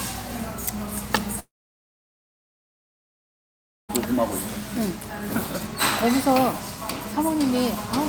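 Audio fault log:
1.39 to 3.91 s, long network dropout: a brief fading buzz, then about 2.4 s of silence; the sound resumes with that stretch skipped rather than delayed, likely lost packets.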